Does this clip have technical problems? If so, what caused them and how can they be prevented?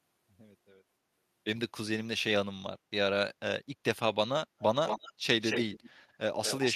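Yes. An echo leak, likely from a far-end speakerphone whose echo canceller let its loudspeaker pickup through, sends a copy of the speech back about 222 ms late. It appears faintly at 4.59–4.64 s, then clearly and nearly as loud as the speech at 4.87–5.13 s, 5.41–5.9 s and 6.43 s to the end. Using a headset, or an echo canceller that adapts properly, prevents this.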